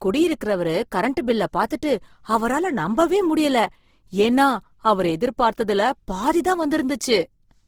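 Throughout the speech, an encoder starved of bits has likely filled thin bands with folded or noise content, pointing to Opus compression in its CELT mode near 16 kbps. The sound is plainly rough and grainy, though it still extends to about 20.3 kHz.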